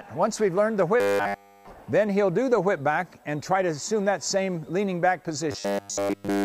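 From 1.00 to 1.70 s, and again from 5.52 s to the end, the sound turns into a rigid 100 Hz buzz. This is robotic sound from repeated short buffers, likely from a 10 ms chunk being repeated continuously.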